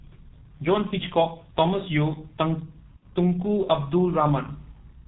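Throughout, the G.723.1 codec squeezes the speech into a narrow, muffled band with a hoarse edge and smeared consonants, which fits a low bitrate near 6 kbit/s rather than simple low-pass filtering. From 2.97 to 3.04 s, VoIP packet loss concealed by the speech codec stretches the last sound into a fading buzzy tone or coloured noise, unlike a dropout's abrupt silence.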